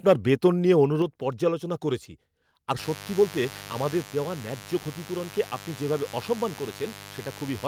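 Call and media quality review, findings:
Sudden level drop at 1.02 s, speech and background about 4 dB quieter; likely microphone volume stepped down in one step by call software's input gain control.

Steady raspy mains buzz from 2.78 s to end, roughly 10 dB below speech; switching spikes twice per 50 Hz cycle with harmonics into kilohertz, from a dimmer, rectifier or unshielded cable.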